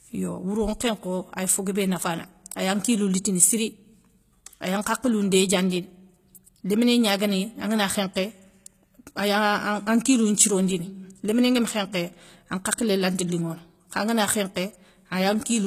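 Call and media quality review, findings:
HE-AAC compression, throughout the speech, damage plainly audible. Treble bright but not genuine: s sounds gritty, metallic and lispy, with harmonics failing to line up across the crossover. Likely cause is spectral band replication: only the lower spectrum is coded, and the upper bands are copied up from below under a coarse envelope. This fits a low bitrate of about 20 kbps. Nothing above 14.9 kHz.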